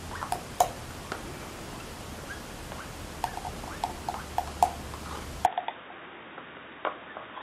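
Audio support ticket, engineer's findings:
Input switched to a poorer device, likely a fallback microphone or headset call profile, at 5.46 s through the end of the clip. New capture path band-limits to nothing above 3.8 kHz, so the sound turns dull and boxy abruptly, with no gap at the switch. Level drops by around 5 dB. Different faint background noise sits well below the signal. Tone colour shifts with the new device's response.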